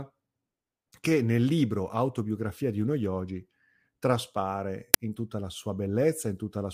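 At 4.94 s, just after "di uno yogi traspare" and before "in tutta la", the speech is interrupted by an uninitialised buffer: a block was sent to the output before any audio had been written into it, so whatever stale memory it held was played as samples. The result is a sharp, loud crack lasting about 5.8 ms, which fits a 256-sample buffer. On a waveform it appears as a brief slab of large, jagged values, and on a spectrogram as a thin vertical stripe spanning the whole frequency range.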